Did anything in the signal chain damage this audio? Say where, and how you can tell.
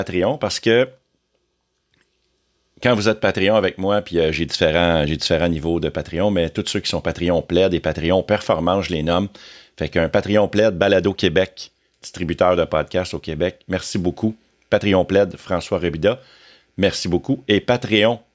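No, nothing in the signal chain has damaged this speech recording. None of the stages, from wiring and conversion through processing, transmission, storage and playback, has left any audible mark on it.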